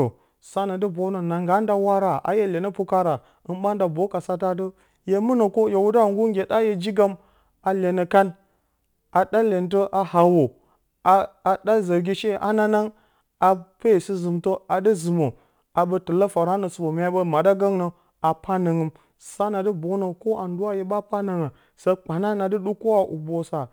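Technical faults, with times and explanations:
Throughout, sample clock jitter: the converter's timing wobbles by a few microseconds, so samples land slightly early or late. Steep, fast-moving parts of the speech suffer most. A faint hiss, roughly 35 dB below the signal, rides on louder, brighter sounds and disappears in pauses.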